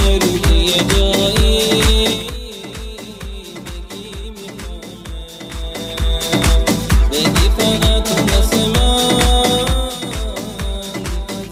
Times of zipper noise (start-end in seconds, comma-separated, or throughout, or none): 9.56-9.98